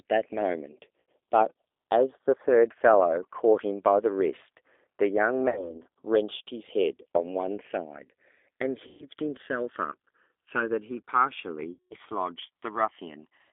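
G.729 coding runs through the whole speech clip. The codec rebuilds each 10 ms frame from a vocal-tract filter, a pitch predictor and a handful of pulses. That leaves the voice plainly rough and faintly synthetic. The line confines it to roughly 300 Hz to 3.6 kHz, so sibilants and airy detail are gone and the sound is thin and boxy. The damage suggests a low-rate 8 kbit/s variant such as G.729A.

VoIP packet loss concealed by the speech codec occurs four times: at 1.01 to 1.08 s, 5.50 to 5.81 s, 8.87 to 9.06 s, and 11.73 to 11.94 s. The missing stretches are 80, 60, 120 and 180 ms. Those lengths fit runs of 20 ms packets. At each gap the decoder keeps extending its last pitch and filter with falling gain, so the voice smears into a buzzy tone or coloured noise that fades. It then sounds weak and distorted for a short while after audio resumes, because each frame depends on the one before it. 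The longest gap, near 11.7 s, loses 180 ms.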